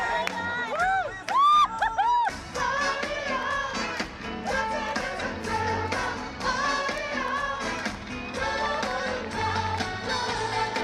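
From about 8.66 to 9.84 s there's a train of clicks: roughly fifteen sharp, same-shaped ticks at a steady 12 per second, sitting well above the sound, around 10 dB hotter. That regular pulsing most likely comes from nearby equipment interference or a faulty connection or power supply.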